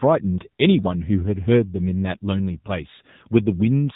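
From start to finish the speech carries the sound of the AMR narrowband mobile codec, and the damage is plainly audible. Nothing above about 3.8 kHz survives, and the voice sounds boxed into a phone line. The buzzy, synthetic edge fits AMR-NB at 7.95 kbps, where a vocal-tract model excited by a handful of pulses per subframe replaces the real waveform and smooths away fine detail.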